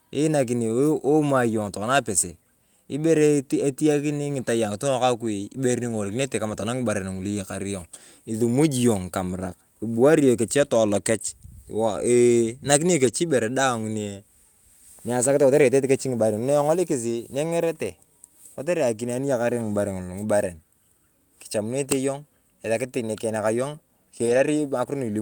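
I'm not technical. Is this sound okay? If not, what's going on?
No. At 6.49–6.55 s, 13.05–13.07 s and 24.25–24.39 s there are lost packets rebuilt from error correction: a stand-in copy is played, so the speech sounds briefly rough and fuzzy rather than dropping out or falling silent.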